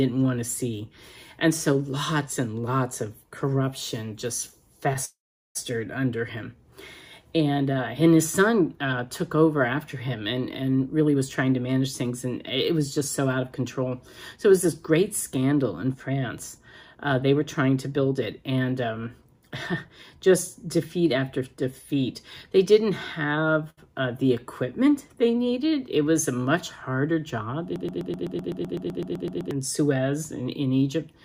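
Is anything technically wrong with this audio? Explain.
Yes. There are four kinds of fault.

From 5.05 to 5.57 s there is a call audio freeze. The last sound carries on as a fading buzz, then about 400 ms of silence. The cause is likely late packets emptying the jitter buffer. The audio resumes where it stopped, so roughly half a second is inserted and nothing is lost.

A jitter buffer speed-up occurs three times: 10.80 to 12.26 s at 108% speed, 12.71 to 13.94 s at 106%, and 14.36 to 18.49 s at 106%. The receiver trims tiny pitch-period slices to shrink an overfull buffer. The pitch stays the same, but the sound feels hurried. Roughly 150, 70 and 300 ms go in the three stretches.

A short stall from a late packet runs from 23.70 to 23.79 s. A packet arrived late, so the last sound was stretched for 75 ms to cover the wait. That sound is held slightly too long, with a slight buzz or dip. 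Nothing is missing.

From 27.76 to 29.51 s there is a broken-record loop. A 127 ms fragment repeats exactly, back to back, 14 times. The likely cause is a stalled player or stream resending its last buffer. The audio that should have played there is lost.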